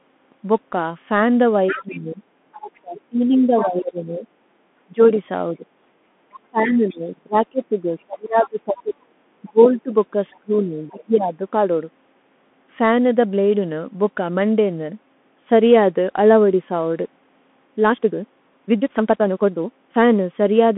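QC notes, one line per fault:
Throughout: Bluetooth CVSD headset codec. The speech is narrowband, with the line band sitting roughly from 200 Hz to 3.5 kHz and nothing above 3.8 kHz. The codec damage is plainly audible. Each sample is coded as a single up-or-down bit, with a step size that adapts. That step lags behind fast, loud high content, so sibilants turn scratchy and grainy. A fine granular hiss rides beneath the speech. The sound fits a 64 kbps CVSD link.
1.68 to 3.66, 6.75 to 6.99, 8.43 to 8.49, 9.67 to 10.38: other side's voice leaking through. A second voice comes through faintly under the talker. It is about 15 dB down in the first stretch and about 20 to 25 dB down in the later scraps. The likely cause is the far end playing on a loudspeaker and the echo canceller leaving residue in the microphone.
1.7 to 11.43: speech suppressed in double talk. The talker's level repeatedly dips, with the deepest drops around 25 dB. 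Together the drops add up to roughly five seconds of affected sound. The likely cause is the echo canceller failing to separate the talker from the loudspeaker echo and attenuating both while both sides spoke at once.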